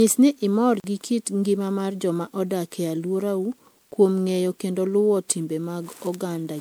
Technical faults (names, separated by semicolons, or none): generation loss; block of digital silence